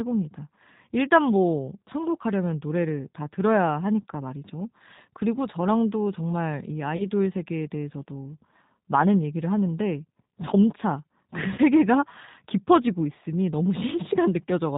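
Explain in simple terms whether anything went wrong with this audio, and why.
The whole recording passed through the G.729 codec, a phone-call compression scheme that rebuilds speech from a simplified model of the voice. It cuts off everything above 4 kHz, so the speech sounds muffled, slightly rough and artificial, though it stays understandable.

There are two short dropouts of VoIP packet loss concealed by the speech codec, at 6.97 to 7.02 s (about 20 ms) and 11.55 to 11.59 s (about 30 ms). Pieces of the call went missing, and the decoder filled each gap by stretching the last bit of sound into a brief buzzy or noisy, fading smear. The speech stays weak or distorted for a moment afterwards.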